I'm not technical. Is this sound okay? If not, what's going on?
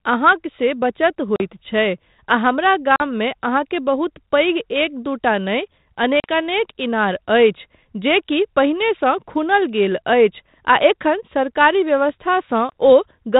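No. Packet loss on an ADPCM call at 1.36, 2.96, 6.2 and 12.7 s: small chunks of the call vanish, leaving abrupt silent gaps, and the decoder briefly stumbles back slightly distorted.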